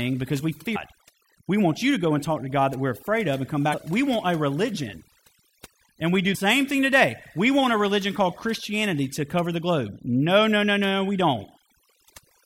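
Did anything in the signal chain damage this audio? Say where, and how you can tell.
Yes. Overdone noise removal was applied across the whole clip. The reduction stage pushed any frequency band near its noise estimate far down or out, taking quiet speech detail with it. The background collapses to near silence with twinkling specks.

Damaged data in a compressed stream hit the codec layer at 0.75 s, 3.70 to 3.74 s and 6.31 to 6.36 s. Corrupted bytes made the decoder misread frames and resync at the next header. Each spot is a brief chirp or blip.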